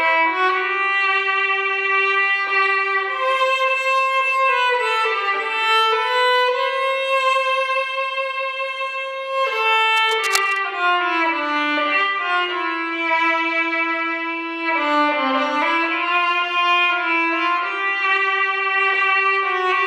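At about 9.92 s a patch of cable scratch noise comes in and hangs around until roughly 10.65 s, so you get a bit under three-quarters of a second of rough, uneven scratching and rustling laid over the sound. It's fairly prominent, sitting not far below the main signal. The likely culprit is a worn cable, plug or control getting moved, with the contact resistance jumping about and spitting bursts of noise into the path.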